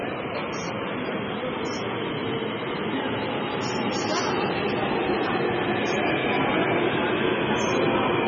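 Throughout, the audio is dull and watery, with nothing above 7.3 kHz. Weak detail swirls and chirps as it drops in and out. Attacks sound smeared. This is heavy MP3 compression, likely from an encoder starved of bits, which fits a rate near 16 kbps.

From 5.10 to 5.33 s there is hard clipping. The peaks exceed what a stage could pass, by about 1 dB, and get cut flat. The flattened tops add high harmonics, heard as a brief crackle on the loudest moments.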